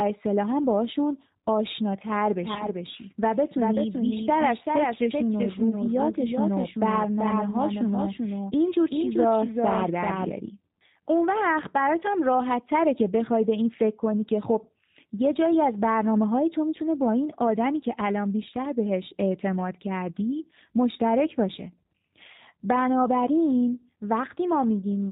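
G.729 coding runs throughout. This 8 kbit/s codec rebuilds the speech from a filter, a pitch predictor and a few pulses, so nothing above 4 kHz survives and the voice sounds plainly rough and synthetic.

A doubled audio track runs from 2.39 to 10.31 s. A second full-band copy trails roughly 0.4 s behind, about 5 dB quieter, with no room colour. It likely comes from a second, slower capture path, and it starts and stops abruptly.

VoIP packet loss concealed by the speech codec occurs from 2.54 to 2.67 s. About 20 ms of audio went missing, which fits a single lost packet. The decoder extrapolated from its last pitch and filter, producing a brief stretched, fading sound that stays weak afterward.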